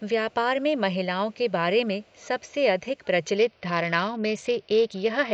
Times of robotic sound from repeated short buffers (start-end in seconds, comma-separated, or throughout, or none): none